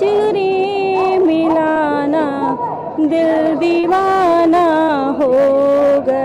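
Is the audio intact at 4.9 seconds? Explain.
No. A burst of packet loss runs from 4.83 to 4.91 s. The receiver stretched and faded the last sound to cover the gap, giving a held buzz or a fading hiss. A spectrogram shows flat, smeared bands thinning out, then an abrupt restart.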